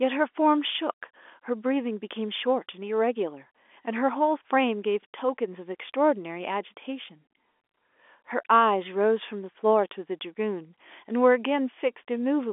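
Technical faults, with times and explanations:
Nothing here counts as a fault: the speech just comes across with the narrow band of ordinary G.711 telephone coding, roughly 300 Hz to 3.5 kHz with nothing above about 3.7 kHz, which is exactly how a phone line is meant to sound.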